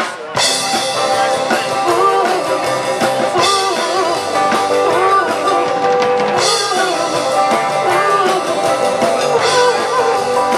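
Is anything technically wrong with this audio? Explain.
Yes. Crude rate conversion runs through the whole clip. The sample rate appears to have been changed by linear interpolation between neighbouring samples, with no anti-aliasing filter. The pattern of the error fits a step from 48 kHz down to 44.1 kHz. The interpolation error repeats on a cycle set by that ratio, producing inharmonic tones around 35 dB below the signal. These are heard as a gritty fizz that rides on louder and brighter passages.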